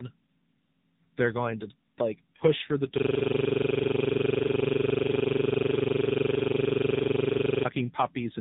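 Speech that sounds rough, muffled and warbly throughout, with nothing above 3.8 kHz: tandem speech coding, where successive codecs re-encode degraded audio, likely ending in low-rate AMR-NB. From 2.98 to 7.65 s, after "like push for the", a 42.67 ms fragment repeats as a stuttering buzz at 23.4 Hz, a system hang loop replaying a frozen ring buffer, which fits a 2048-sample buffer.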